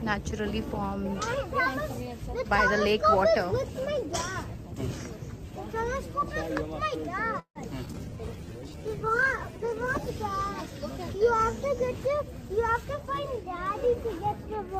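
At 7.39 s the sound halts for about 0.19 s. The last sound is stretched into a fading buzz that drops to roughly 90 ms of silence, then the audio resumes exactly where it stopped. This is a call audio freeze, likely from packets held up in transit until the jitter buffer ran dry. Unlike a skip, nothing is lost; a gap is simply inserted.

Two skips ahead follow at 7.85–7.89 s and 7.92–7.96 s. Each drops around 70 ms of audio, and the two sides are spliced with only about 10 ms of filler. The sound lurches forward rather than pausing, which sets these apart from the freeze.

From 7.96 to 10.20 s a call bitrate drop takes the encoder from 48 to 12 kbps, holding at the floor for about 2.1 s. Coarser coding and a lost top end make the sound muffled and watery. The pitch and timing stay intact, so this is a quality change, not a timing one.

Overlapping it, from 8.10 to 9.62 s, a jitter buffer slow-down plays the audio at 93% speed by repeating pitch periods, adding 108 ms. 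The sound is drawn out but unchanged in pitch, unlike a simple slowed recording.

From 12.43 to 14.69 s a jitter buffer speed-up runs at 106%, trimming roughly 150 ms in small pitch-period cuts. The sound seems hurried at the same pitch, spread evenly rather than as one abrupt jump like a skip.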